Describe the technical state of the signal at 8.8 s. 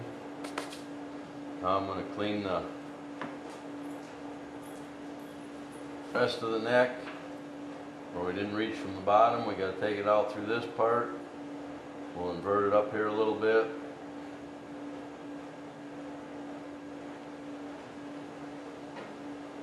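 At 8.8 s the signal is intact, with no audible fault at that point.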